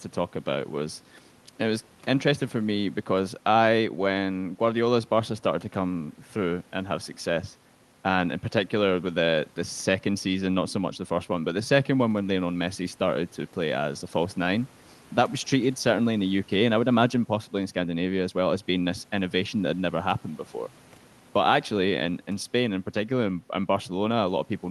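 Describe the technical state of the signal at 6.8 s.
At 6.8 s the speech is intact, with no dropout, glitch or other fault, only the ordinary coding character of the call path it travels through.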